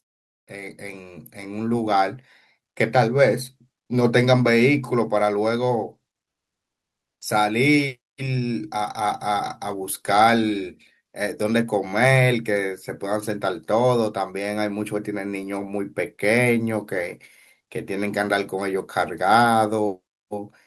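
From 0.51 s to 4.18 s, automatic gain rising lifts the level by about 10 dB as the gain control reacts to a quiet input. Speech and background swell together over several seconds, which separates it from a talker moving closer, where the room noise would stay put.

From 6.29 s to 7.21 s, the background is replaced by comfort noise for 920 ms. The detailed room sound gives way to a flat, featureless hiss about 11 dB quieter, sitting roughly 65 dB below the loudest passages. The likely cause is discontinuous transmission, as in Opus DTX, filling the pause with synthetic noise. That steady filler, rather than true silence, distinguishes it from a noise gate closing.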